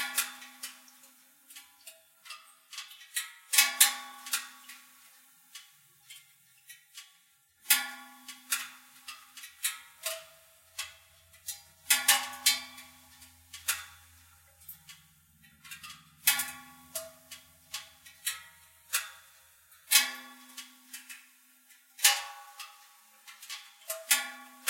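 No technical faults can be heard anywhere in the recording of sounds. Nothing in the audio calls for a timestamp or a note on how a fault arose.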